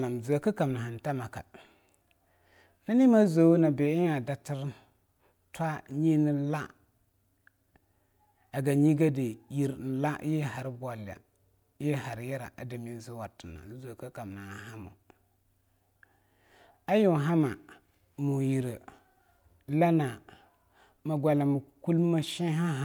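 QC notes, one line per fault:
No technical faults are audible anywhere in the signal.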